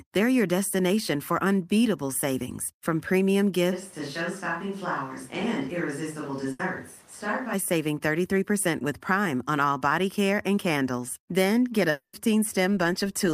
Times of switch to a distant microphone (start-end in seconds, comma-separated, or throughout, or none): 3.74-7.52